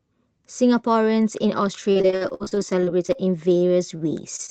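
Speech that suffers repeated packet loss (robotic sound) over two stretches: audio packets kept going missing, and each hole was filled by stretching the last sound. From 1.91 to 3.20 s about 29% is patched, with gaps up to 55 ms; from 3.58 to 4.50 s about 11%, gaps up to 25 ms, all heard as choppy speech with pieces missing through the Opus call path's 8 kHz bandwidth.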